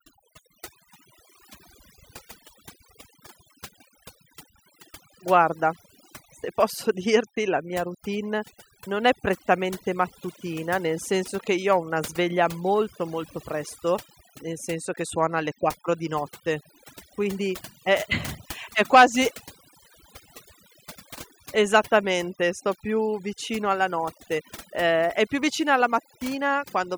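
A speech recording whose background drops and breaks up into twinkling specks from start to finish. That is overdone noise removal: reduction set too strong switches off frequency bands near the noise estimate, taking quieter vocal detail with them.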